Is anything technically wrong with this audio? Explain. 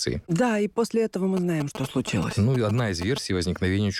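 Yes. GSM signalling bursts break in from 1.37 s to 3.18 s, just after "и после этого мы". A nearby 2G phone was exchanging short control transmissions with its network, and the audio circuitry rectified that radio energy, turning the envelope of the bursts into sound. The result is a galloping dit-dit-dit of brief buzzes pulsing at about 217 Hz, sitting roughly ten decibels below the speech.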